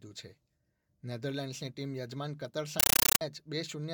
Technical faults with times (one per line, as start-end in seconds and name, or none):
2.80-3.21 compressed stream played as audio